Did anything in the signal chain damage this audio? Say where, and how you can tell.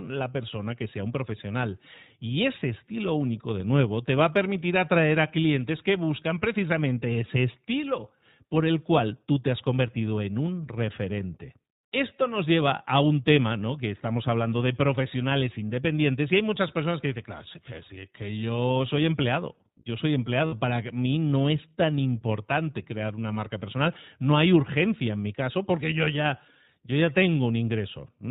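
Yes. At the codec stage, iLBC coding runs throughout: nothing above 4 kHz, plainly audible rough, synthetic texture fitting 15.2 kbps with 20 ms frames, unlike a clean low-pass filter.

On the network, lost iLBC frames leave a held, buzzy vowel from 20.46 to 20.54 s, fitting three 20 ms frames. It recovers at once rather than smearing onward.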